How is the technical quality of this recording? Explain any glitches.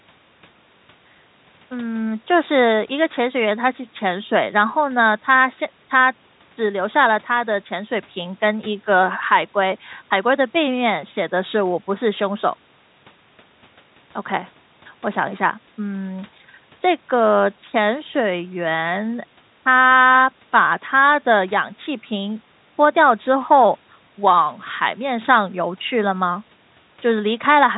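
The recording's technical quality shows no glitches to explain, with the telephone-band sound of its call path being normal rather than a fault.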